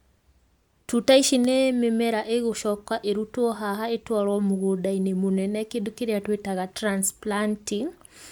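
Listening through the recording, nothing stood out as a technical fault at any point.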